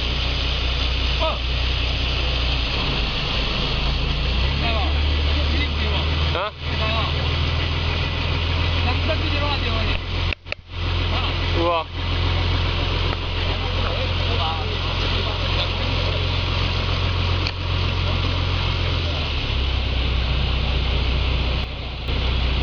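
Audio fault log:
21.64 to 22.08 s, sudden gain jump: the level drops by about 7 dB in a single step, sound and background falling together with no fade, then comes back. That's likely a gain setting applied with no ramp between samples.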